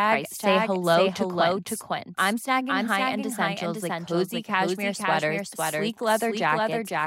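A doubled audio track runs throughout: a full-band copy of the speech trails about half a second behind, somewhat quieter, likely from a second, slower capture path. Unlike room echo, it has no decay or colouring.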